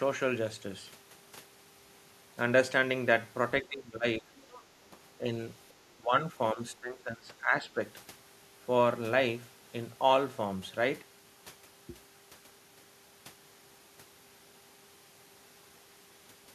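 From 3.62 to 4.3 s, speech suppressed in double talk pulls the level down by around 15 dB, likely because the echo canceller turned down the talker while the far end was also speaking. Short, shallow dips follow at 4.91–4.97 s and 5.2–5.25 s, then a deeper drop of about 20 dB at 5.97–6.27 s and a long one from 6.53 to 7.77 s.

Between 4.37 and 4.64 s, the other side's voice leaks through as a faint second voice about 25 dB below the speech, likely loudspeaker echo the canceller failed to remove. Unlike the suppression dips, which take level away, this fault adds an extra voice on top.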